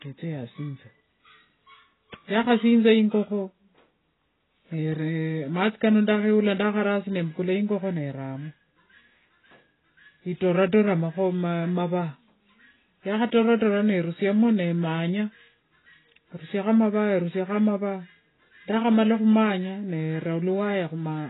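From start to end, heavy AAC compression: nothing above 3.9 kHz, plus warbling smear a plain low-pass filter wouldn't add, likely from about 16 kbps.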